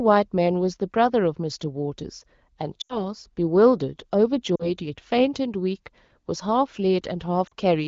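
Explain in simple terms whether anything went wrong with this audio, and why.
Lost AMR speech frames cause three short breaks, at 2.81 to 3.03 s, 4.56 to 4.70 s and 7.47 to 7.54 s. The wideband phone decoder fills each gap by repeating and fading the last good sound, which is heard as a quick fade to near silence before the speech returns.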